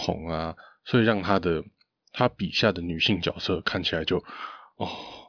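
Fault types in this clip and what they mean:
No faults can be heard.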